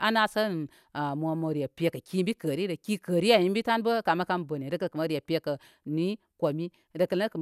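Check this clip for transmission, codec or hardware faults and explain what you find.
No faults detected here.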